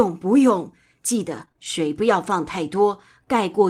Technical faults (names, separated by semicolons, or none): repeated packet loss (robotic sound); lost packet rebuilt from error correction